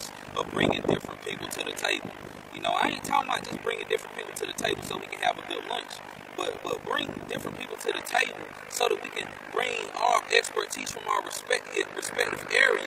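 Overlap-add ripple runs through the whole thing. The audio was split into windowed frames and stitched back together with an overlap whose windows don't add up to a flat gain, so the level dips once per frame, around 50 times a second. The dips are huge, about 60 dB deep, so instead of a gentle flutter you get a harsh, buzzy, robotic tremolo chopping the sound from start to finish.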